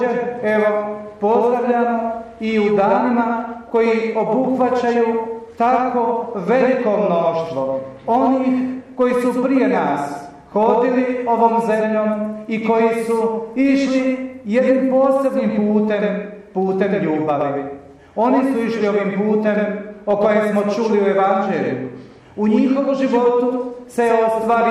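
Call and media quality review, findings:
Doubled audio track throughout: copy trails about 100 ms, roughly 5 dB down, without decay or room colour, unlike echo. Likely second, slower capture path.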